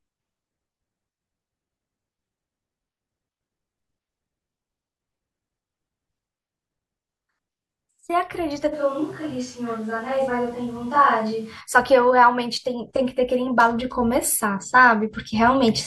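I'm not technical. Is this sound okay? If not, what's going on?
No. From about 8.74 to 11.60 seconds the speech suddenly turns roomy and hollow, with less bass and more background noise, then snaps back. That's a switch to a distant microphone, likely because the close mic dropped out for a few seconds.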